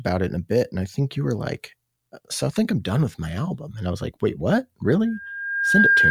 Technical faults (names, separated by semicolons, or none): loudspeaker feedback squeal